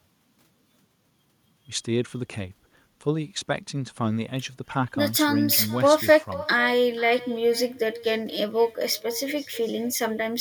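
From start to finish the speech carries an echo with no canceller. The far end is playing the call through a loudspeaker, its microphone catches that playback, and nothing subtracts it, so the talker's own voice returns after roughly half a second. The copy sits about 17 dB below the direct speech and sounds thinner. On a waveform each burst of speech is trailed by a smaller replica, and on a spectrogram faint, thinner duplicates of every syllable appear shifted right in time.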